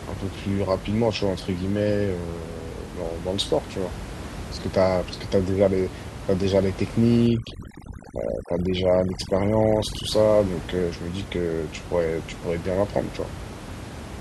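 Overdone noise removal affects the speech from 7.27 to 10.12 s. A noise reduction stage set far too aggressively pushes individual frequency bands down or out entirely whenever their level sits close to its noise estimate. The room noise, about 12 dB below the speech, falls into that range. Through this stretch the background drops and breaks up into twinkling, warbling specks, and the quieter parts of the voice are stripped away with it.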